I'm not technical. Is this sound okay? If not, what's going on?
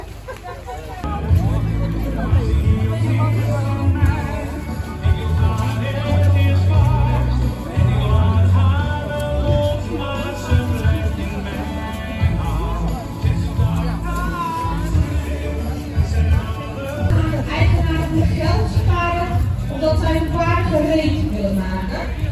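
Yes, nothing in this recording points to a technical problem with how the sound was captured or played back.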